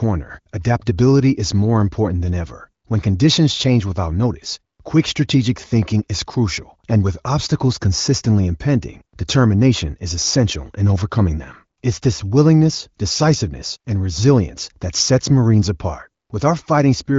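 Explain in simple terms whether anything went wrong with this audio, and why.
Nothing went wrong: the speech runs through the AMR wideband (HD Voice) phone codec as designed, so the sound tops out around 7.5 kHz and carries at most a faint trace of coding.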